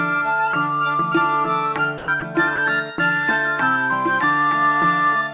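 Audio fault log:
1.98–2.08 s, 2.20–2.22 s and 2.56–2.58 s: sound dropped by the voice detector. The sound gives way to flat, steady noise for 100 ms, then twice for 20 ms, before resuming. The likely cause is the sender's detector mistaking quiet passages for background, so comfort noise filled the gaps.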